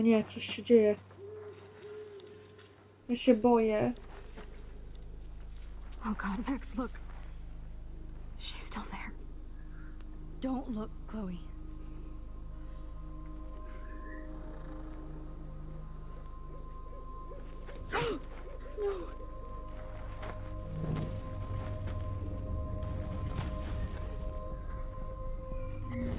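Nothing in the audio stood out as a technical problem on listening.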